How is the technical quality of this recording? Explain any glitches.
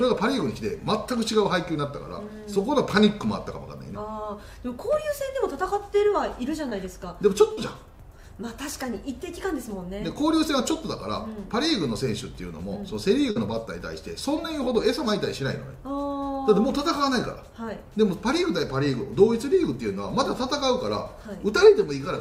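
The recording has three brief short concealed packet loss glitches, at 6.69–6.73 s, 7.53–7.59 s and 13.31–13.37 s. About 20 ms, then 40 ms and 40 ms of audio never arrived in time. The receiver extrapolated the preceding sound to fill each hole, leaving a short smear or wobble.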